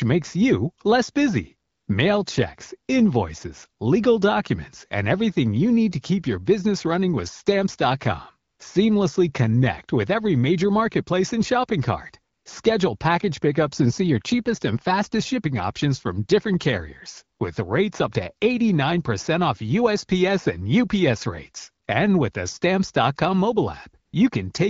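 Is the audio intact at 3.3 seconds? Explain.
Yes, at 3.3 seconds the speech is intact, with nothing beyond the light, even coloring of the wideband AMR-WB path at 12.65 kbit/s that runs through the whole recording.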